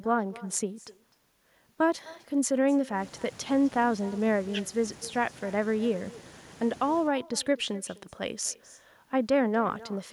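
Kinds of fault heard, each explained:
Echo with no canceller: the far end's speaker leaks into its mic, so the talker's voice returns about 0.3 s later, about 22 dB quieter.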